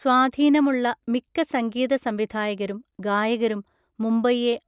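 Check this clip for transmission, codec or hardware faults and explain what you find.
No transmission, codec or hardware faults.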